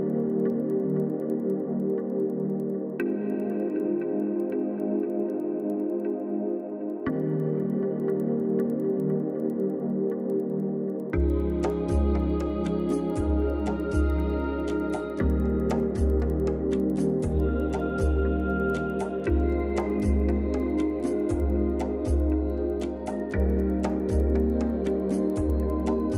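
From start to finish there's a steady tick running under the audio, ten times a second, and it only shows up while there's signal to carry it. That's the resampler restarted on every block: the 24 kHz to 48 kHz conversion was done in 100 ms chunks with no memory between them, so each chunk's edges were interpolated against the wrong neighbouring samples. Every boundary lands slightly off, and those small errors stack into a regular 10 Hz ticking.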